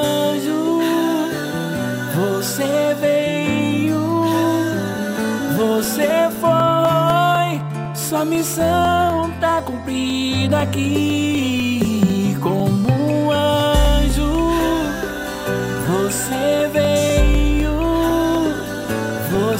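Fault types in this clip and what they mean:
Periodic USB or driver dropouts: from 5.85 s to 19.35 s the sound is broken by regular ticks at a steady 0.25 s spacing, four per second and some fifty in all, each a gap of about 2 ms where the audio drops to silence. The even spacing points to a background task that stalls the USB bus or the audio driver on a fixed cycle, so a small block of samples never arrives and silence fills its place.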